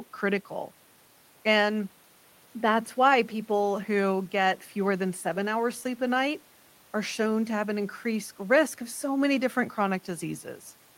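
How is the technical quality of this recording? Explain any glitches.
Nothing glitchy turns up anywhere in this recording, so there's nothing to explain.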